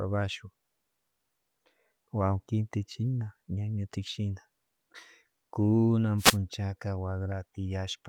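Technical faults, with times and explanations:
6.18 to 6.38 s, wireless microphone noise hit: a brief swish of static, about 0.2 s long, rises over the speech and then clears, with the hiss briefly crowding the speech before it returns cleanly. This is the sound of an analogue FM radio link dipping in strength as reflected copies of the signal partly cancel the direct one, so the receiver's own noise climbs for the duration of the fade.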